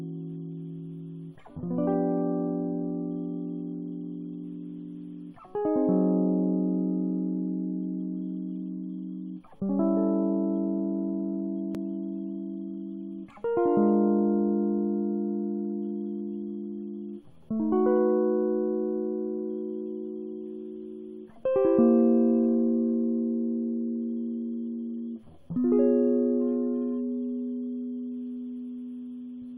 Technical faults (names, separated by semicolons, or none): none